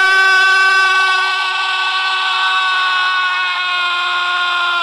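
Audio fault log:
0.12–4.82 s, clock slip clicks: a faint, fast, regular rattle of single-sample ticks roughly every 30 ms, likely from two unsynchronised clocks drifting apart by around 700 ppm. The spectrogram shows evenly spaced thin vertical lines, and the waveform shows tiny one-sample steps.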